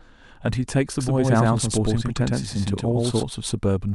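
From 0.99 to 3.23 s, a doubled audio track: an equally loud copy lags about a tenth of a second, likely from a slower second capture path, showing as shifted duplicate waveform shapes.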